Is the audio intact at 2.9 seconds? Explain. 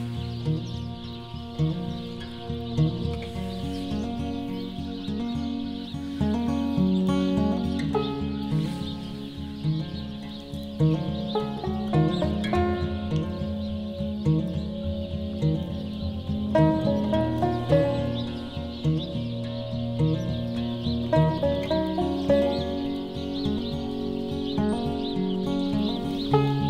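Yes, the audio is intact at 2.9 seconds, with no dropout, click, distortion or other fault audible at that moment.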